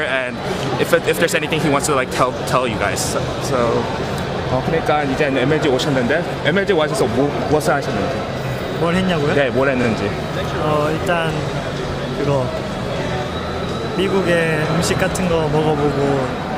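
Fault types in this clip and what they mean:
Repeated frames: at 9.83 s a 40 ms stretch of the compressed stream plays once more. The same block of frames was written or delivered twice, so the decoder faithfully renders that fraction of a second a second time, heard as a very short stutter where the sound briefly jumps back. The length fits two frames of about 20 ms each. Nothing is lost, but everything after that point arrives 40 ms later.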